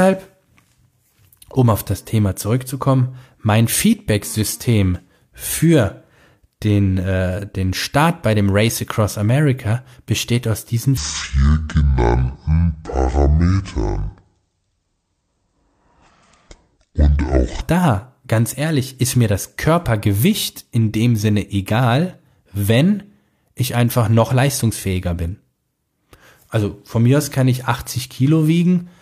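From 10.97 to 17.61 s, after "besteht aus diesen", a section at the wrong speed plays back at 0.57 times its recorded rate, likely from being fitted to the wrong clock. The speech drags, heavy and slow, dropping roughly ten semitones until "da ganz ehrlich ist" resumes normally.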